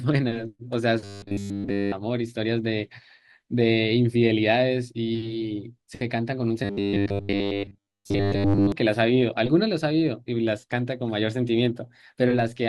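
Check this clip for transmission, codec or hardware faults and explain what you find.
Two kinds of fault are present, both from the transmission or decoding path.

Robotic sound from repeated short buffers, 1.04 to 1.93 s and 6.64 to 8.72 s: new audio was likely arriving too seldom, so playback kept looping a 10 ms slice instead of real speech. Across both spans the repetition takes over entirely, imposing a rigid, metallic 100 Hz buzz that only loosely tracks the speech.

Corrupt frame decoded, 9.45 to 9.50 s: a damaged compressed frame, which sounds like a single one, was decoded anyway, its misread values placing energy at wrong frequencies. The result is a brief, out-of-place artifact lasting roughly 44 ms.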